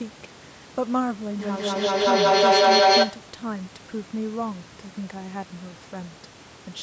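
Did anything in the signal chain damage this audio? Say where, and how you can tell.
Yes. From 1.39 to 3.44 s, repeats roughly every 200 ms swell to about 12 dB over the speech: feedback echo between two call devices.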